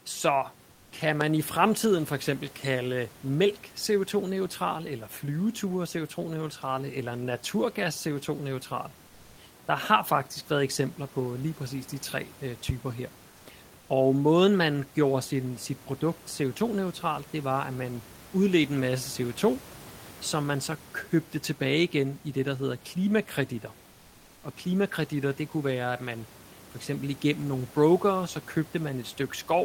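From 0.71 to 0.91 s, the room background in this speech clip gives way to comfort noise for about 200 ms. The hiss becomes smooth and featureless and about 2 dB quieter. The cause is likely discontinuous transmission of the Opus kind. The sender stops sending during the pause, and the receiver fills it with synthetic noise shaped like the background. The real room noise, about 26 dB below the speech, carries detail that the fill lacks.

At 1.21 to 1.24 s a loud pop cuts in. It is a single sharp click, far louder than the speech. It is likely a voltage step or spike from a plug, switch or driver glitch. The audio carries on beneath it.

A second loud pop lands at 12.69 to 12.72 s.

From 23.91 to 24.43 s, comfort noise returns for about 520 ms. Again the background flattens and drops about 2 dB until the sound resumes.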